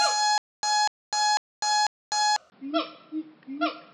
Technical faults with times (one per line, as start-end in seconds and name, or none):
0.38-2.36 stutter with silent gaps
2.50-3.93 input switched to a poorer device